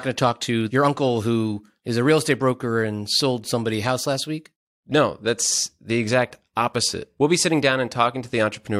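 No technical faults can be heard anywhere in this speech recording. There is nothing to place on the timeline.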